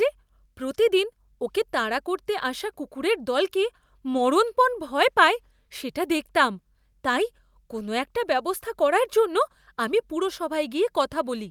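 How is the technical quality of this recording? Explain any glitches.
Nothing technically wrong can be heard in this recording.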